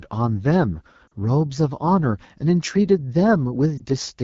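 The speech throughout has a rough, raspy, buzzy texture. The consonants and the upper range sound grainy and papery rather than clean, and the audio stops short of full brightness. This plainly audible damage comes from the AMR wideband (HD Voice) codec working at one of its lowest rates. The roughness points to about 8.85 kbit/s. At that rate the pulse-driven vocal tract model has too few bits to shape the voice below 6.4 kHz, and the band from 6.4 to 7 kHz is only filled with shaped noise.

Twice the speech briefly stumbles. From 1.07 to 1.13 s it smears and drops away for about 40 ms, and at 3.77 to 3.82 s a shorter, roughly 20 ms dip or warble interrupts it. These are lost AMR speech frames. Frames damaged in transmission failed their checks, so the decoder repeated the last good pitch and vocal tract settings at falling gain. The first gap fits two lost 20 ms frames and the second fits one.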